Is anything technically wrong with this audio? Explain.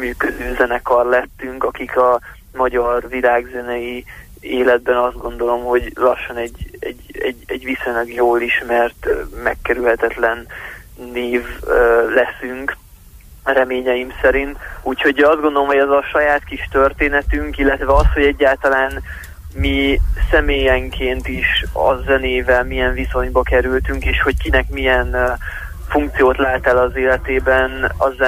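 No, no technical faults.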